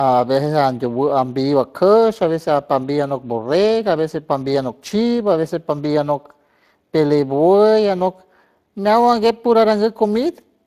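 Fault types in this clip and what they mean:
Speex codec: CELP speech coding with too few bits for the excitation, leaving the speech plainly rough and hoarse throughout, with a grainy, noisy texture. Nothing is present above 15.3 kHz, and the overall damage points to a mid-range bitrate near 22 kbps.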